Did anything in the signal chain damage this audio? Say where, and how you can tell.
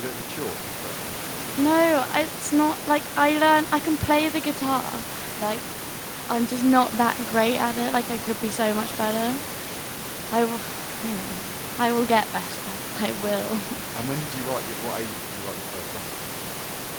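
No damage from the chain.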